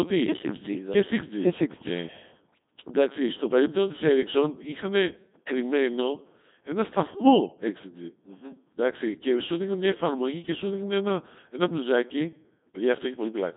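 Speech passed through a Codec 2 vocoder, consistent with its 2.4 kbit/s mode, which keeps only pitch, voicing, energy and spectral envelope and resynthesises from sine waves. Throughout, the result is heavily robotic and buzzy, confined to roughly 200 Hz to 3.6 kHz, with nothing above 3.8 kHz.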